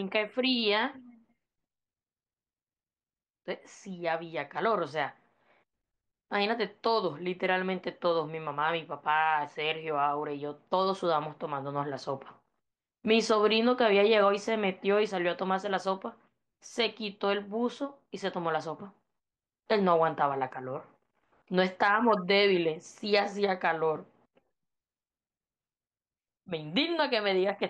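Listening to the speech here, nothing stood out as a technical fault at any point.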